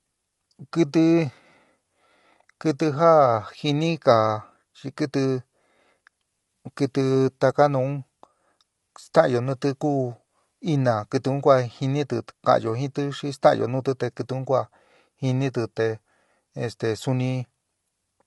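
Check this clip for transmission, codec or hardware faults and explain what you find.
One codec fault runs through the whole clip. From start to end the speech sounds rough and grainy, with noise filling the gaps between harmonics and nothing above 11.6 kHz. The likely cause is low-delay AAC compression (AAC-ELD). Its short frames resolve pitch harmonics poorly, and the plainly audible damage fits a bitrate of around 32 kbps.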